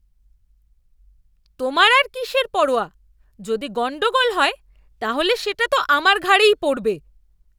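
No technical faults can be heard anywhere in this speech recording. Nothing in the audio stands out at any moment that would call for a timestamp.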